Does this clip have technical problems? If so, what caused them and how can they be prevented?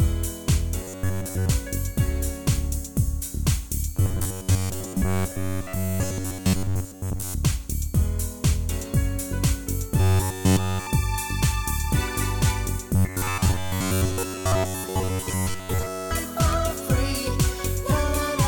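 Yes. There's robotic sound from repeated short buffers at 0.83–1.50 s, 3.96–7.34 s, 10.00–10.87 s and 12.95–16.11 s. A rigid 93.8 Hz buzz replaces most of the sound, and all of it around 10 s. That's likely late-arriving audio with a roughly 10.7 ms chunk being looped. A larger jitter buffer or steadier delivery would prevent it.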